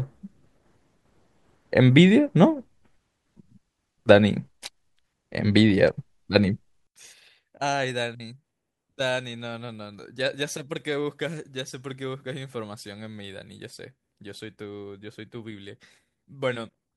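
A speech recording in which, from 6.87 s to the end, the centred voice drops by about 22 dB to a faint residue, consistent with one channel inverted: the likely cause is reversed polarity on one stereo channel, cancelling the shared signal when summed to mono.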